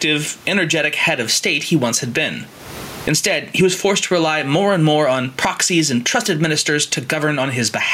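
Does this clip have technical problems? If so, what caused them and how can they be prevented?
Yes. Gain pumping runs through the clip. The gain is pulled down on loud sounds, a swing of around 20 dB. The likely cause is far too much input gain feeding a fast limiter. Lower the gain so the limiter seldom acts.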